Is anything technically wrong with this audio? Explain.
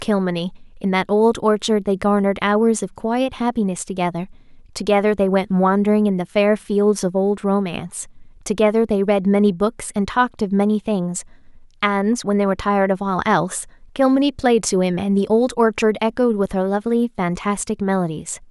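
No, nothing technically wrong can be heard in this speech recording. No fault or defect shows up anywhere in the audio.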